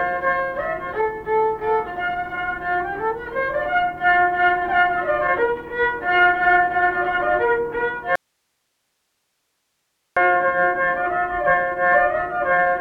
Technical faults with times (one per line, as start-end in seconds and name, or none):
8.15-10.17 audio dropout to a faint residue